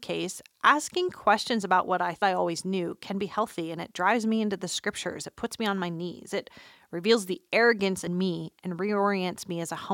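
At 2.21 s, between "questions about what I" and "I always knew can", and again at 8.06 s, after "reveals the arrogance", damaged data in the compressed stream causes a brief glitch. The decoder misreads a corrupted frame, loses sync, and skips ahead to the next valid header.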